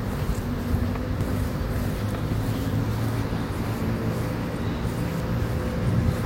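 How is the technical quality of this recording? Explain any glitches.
Three glitches interrupt the sound, at 1.21, 3.25 and 5.20 s. Each is a jump forward of roughly a tenth of a second. The likely cause is a dropped buffer (overrun): samples were overwritten before being read, and the remaining ends were spliced together. On the waveform this shows as an abrupt seam, and on the spectrogram as a thin vertical streak.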